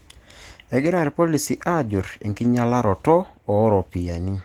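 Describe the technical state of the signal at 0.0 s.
At 0.0 s the speech signal is intact, with no fault present at that moment.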